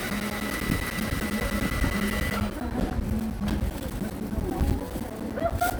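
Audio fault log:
0.10–5.71 s, periodic USB or driver dropouts: a steady train of ticks every 0.1 s runs through the sound, around fifty in all, each a brief gap of roughly 10 ms where the audio drops to silence. The spacing is too regular to come from the source. Something in the background is likely stalling the USB bus or audio driver on a fixed cycle, and the audio due in each stall never arrives.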